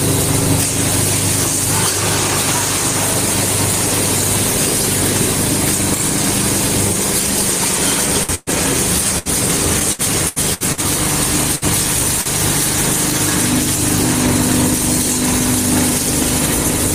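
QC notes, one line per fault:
8.24–8.32 s, short stall from a late packet: a packet arrived late and the jitter buffer emptied, so the last sound is held for about 51 ms before resuming with nothing lost.
8.35–8.50 s, burst of packet loss: consecutive packets were lost, and the receiver extended and faded the last sound for about 119 ms. Audio then jumps ahead, skipping about 60 ms.
9.19–9.28 s, burst of packet loss: a shorter run of lost packets is patched by a fading continuation of about 68 ms, and about 60 ms of audio is skipped.
9.79–10.80 s, repeated packet loss (robotic sound): five separate gaps, the longest 73 ms, are each filled by repeating the last sound. About a quarter of the span is concealed and 240 ms is missing, giving a choppy texture.
11.55–11.64 s, burst of packet loss: lost packets are covered by about 60 ms of held, fading sound, after which playback resumes with about 60 ms skipped.
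12.21–12.29 s, short stall from a late packet: the jitter buffer briefly ran dry and the last sound is stretched about 42 ms, then continues from the same point without loss.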